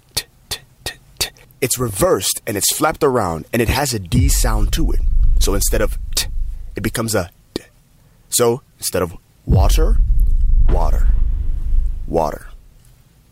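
Nothing in this audio stands out as a technical fault; there are no glitches, gaps or other problems to point to anywhere along the way.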